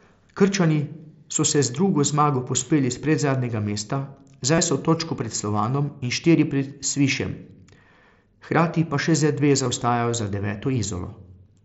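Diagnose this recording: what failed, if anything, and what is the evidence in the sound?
The Bluetooth headset link dropped voice packets twice, giving concealed Bluetooth headset packet loss: at 4.55 to 4.58 s (about 30 ms, consistent with four lost frames) and at 9.64 s (15 ms, likely two frames). The receiver filled each gap by repeating recent waveform, under the mSBC wideband band limit.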